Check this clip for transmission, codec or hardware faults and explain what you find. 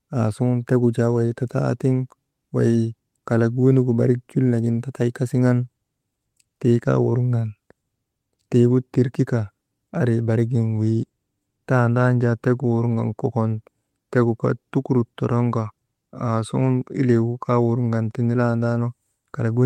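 I found no faults to report in this clip.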